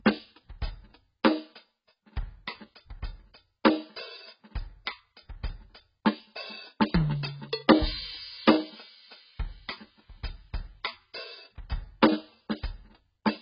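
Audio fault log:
Throughout: AAC compression, likely the cause of the dull, smeared music. Nothing survives above 5.1 kHz, and the remaining bands warble and fizz from heavy quantisation, which fits AAC-LC at a very low bitrate of around 12 kbps.
3.64 s: pre-echo. A short hiss of about 10 ms runs just ahead of a sharp attack, which lands softened. The codec spread its quantisation noise across the whole block, so noise sized for the loud hit also fills the quiet moment before it.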